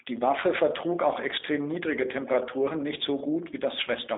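Speech, carried through a G.729 codec for its whole length. The sound is rough and synthetic, which fits a low-rate 8 kbit/s voice coder that rebuilds each frame from a filter and a few pulses. Nothing passes above 3.8 kHz, leaving a narrow telephone band of about 300 Hz to 3.7 kHz.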